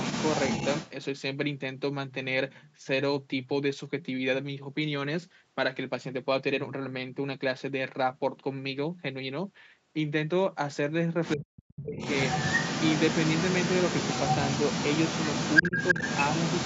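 A speech recording with two kinds of fault. The other side's voice leaking through is audible from 0.0 to 0.91 s and again from 11.96 s to the end, only a few dB below the talker, with a fainter scrap at 11.25–11.44 s. This is likely a loudspeaker echo the canceller failed to remove. On a spectrogram it shows as a second set of harmonic stripes overlapping the main voice, all capped at the 8 kHz band edge. Speech suppressed in double talk appears at 11.36–11.97 s, where the talker drops by roughly 40 dB, and briefly at 15.62–15.74 s, where the dip is shallower, about 10 dB. In both places the canceller likely turned the talker down along with the competing echo. The waveform shows a sudden hollow in the envelope, and the spectrogram shows the voice's energy fading before it returns.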